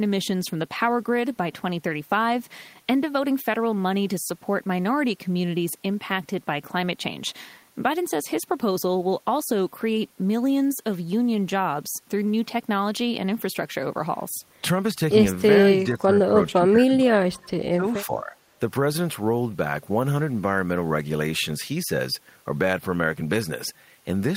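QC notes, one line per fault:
15.86–17.52 s and 17.69–18.34 s, speech suppressed in double talk: the voice sinks about 15 dB for roughly a second, then drops harder, about 25 dB, over half a second, likely the echo canceller clamping down while the far end talked over it.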